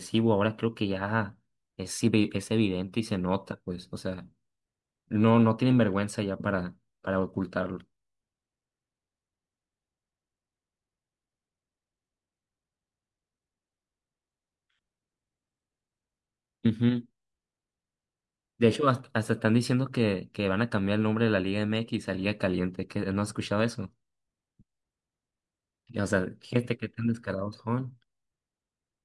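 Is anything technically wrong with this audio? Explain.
No, no technical faults here.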